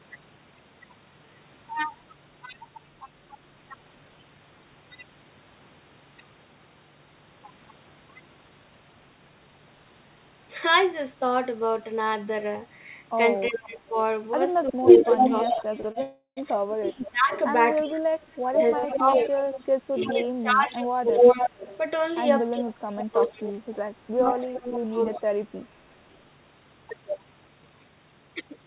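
Speech carried over a narrowband call path, with no content above 4 kHz, shows several call faults. From 13.49 to 21.16 s and again from 22.52 to 25.33 s, the talker dips by up to about 20 dB and then about 25 dB, for roughly three and two seconds in total, most likely speech suppressed in double talk by the echo canceller. Echo leak, likely from a loudspeaker endpoint, returns a copy delayed by 349 ms from 13.62 to 21.77 s at about 5 dB above the speech, and from 23.0 to 24.86 s at about 10 dB below it. Short stalls from late packets hold the sound for 37, 22 and 41 ms at 15.81, 15.92 and 18.79 s. A call audio freeze from 16.03 to 16.39 s, likely caused by held-up packets, inserts a 341 ms gap ending in 120 ms of silence. A jitter buffer speed-up from 26.60 to 28.64 s runs the speech at 112% speed with unchanged pitch, removing roughly 200 ms.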